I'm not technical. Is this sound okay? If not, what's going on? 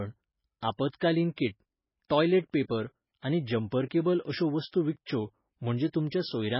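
No. It likely went through heavy MP3 compression, which throws away detail to save space. Throughout the speech, nothing above about 5.5 kHz survives, so it sounds dull and muffled, with a watery, swirly quality and metallic chirps on s sounds.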